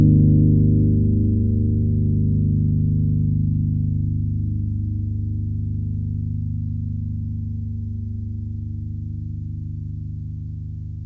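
Sounds, with no technical faults audible.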